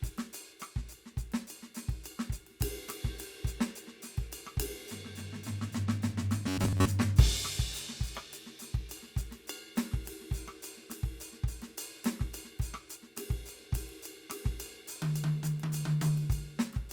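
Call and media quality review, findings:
Robotic sound from repeated short buffers, 6.48–6.88 s. Music collapses into a rigid metallic buzz at about 94 Hz. Likely playout underrun: a roughly 10.7 ms segment is looped and most real audio is skipped. Spectrogram shows a fixed harmonic comb spaced 94 Hz apart. Waveform shows identical repeating cycles.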